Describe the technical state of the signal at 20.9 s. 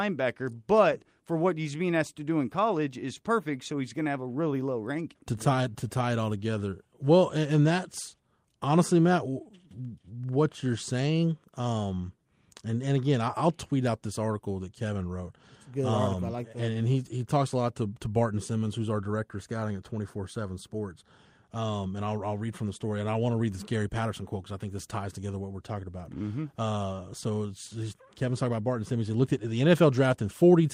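At 20.9 s the speech signal is intact, with no dropout, distortion, glitch or other technical fault audible at that point.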